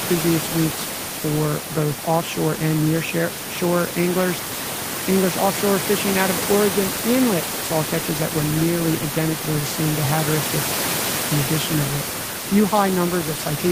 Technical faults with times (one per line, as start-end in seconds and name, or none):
none